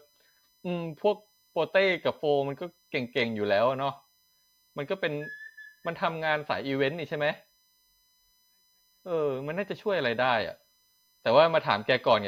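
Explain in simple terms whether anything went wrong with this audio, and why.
A USB connection was leaking electrical noise into the recording. The USB bus pulls power in quick bursts a thousand times a second, and that pulsing crept in through the power or ground wiring. The result is USB whine, a thin, steady high-pitched tone at 1 kHz running faintly under the speech for the whole clip. Its sharpest, most noticeable part sits higher, at 5 kHz, a multiple of that base tone.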